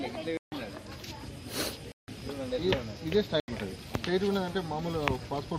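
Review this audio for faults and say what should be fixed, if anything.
Three blocks of digital silence: 0.37 to 0.52 s (about 148 ms), 1.92 to 2.08 s (160 ms) and 3.40 to 3.48 s (80 ms). The audio drops straight to silence and back with no fade. Keep the output buffer fed in time, with a larger buffer or a lighter processing load.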